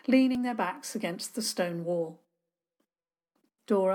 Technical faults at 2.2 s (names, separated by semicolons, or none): none